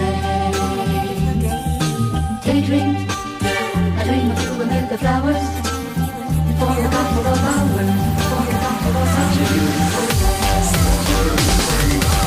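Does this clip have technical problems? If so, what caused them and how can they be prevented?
Yes. A doubled audio track starts abruptly at 6.85 s and runs to the end: a full-band copy trails about one and a half seconds behind, roughly 5 dB quieter, with no decay or room colour, likely from a second, slower capture path or a misaligned edit. Monitor and route only one capture path, and check edits for overlapping duplicate regions.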